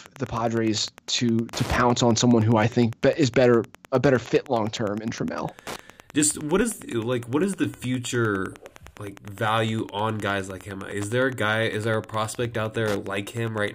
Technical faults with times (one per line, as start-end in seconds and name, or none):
0.00-13.74 Wi-Fi interference